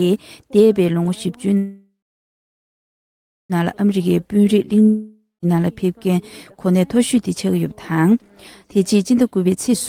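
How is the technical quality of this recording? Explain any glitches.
The recording has a cluster of network-related glitches between about 1.6 and 5.5 s, plus one more near the end.

From 1.57 to 3.53 s there's a call audio freeze. The last sound carries on as a fading buzz, then about 1.6 s of silence. Packets were likely held up and the jitter buffer ran dry. Nothing is lost: the sound resumes where it stopped, just about 1.9 s later.

From 3.62 to 4.00 s, and again from 9.45 to 9.75 s, there's a jitter buffer speed-up. To shed the built-up delay, the receiver snips out tiny pitch-period slices. That's roughly 50 ms at 113% speed the first time and roughly 100 ms at 137% the second. The pitch stays put, but it sounds rushed.

From 4.08 to 4.63 s there's a jitter buffer slow-down. The buffer was short, so the receiver repeated single pitch periods, adding 70 ms and running at 89% speed. 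The sound drags and stretches out.

From 4.83 to 5.45 s there's a long network dropout, probably a stretch where no packets arrived. About 0.6 s is concealed: a fading buzz, then about 180 ms of silence. When the sound returns it jumps ahead, and about 600 ms is simply gone.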